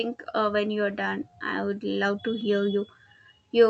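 Speech that briefly drags and stutters from 0.91 to 1.34 s, right after "uh when you're", with five tiny hitches of 11 ms or less, about 45 ms in total. These are repeated stalls (stutter): packets arrived late, so the jitter buffer ran dry and the receiver stretched the last sound until audio resumed, losing nothing. The call path, which sounds like Opus, limits the audio to about 8 kHz.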